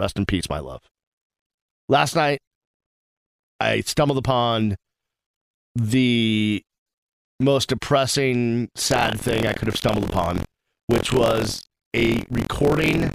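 From 8.89 s to the end, buffer tearing: the ring buffer's writer and reader have slipped, so a small slice of each period replays audio roughly 50 ms old, giving a steady 43.1 Hz robotic rattle that fits a 1024-sample buffer. Unlike irregular dropouts, it keeps an even rate and is heard only while speech sounds.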